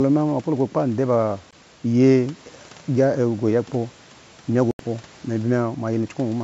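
Bluetooth dropouts at 1.51 to 1.53 s and 4.71 to 4.80 s: the speech cuts abruptly to silence for 20 ms, then 81 ms, and resumes further on, likely from late, dropped packets.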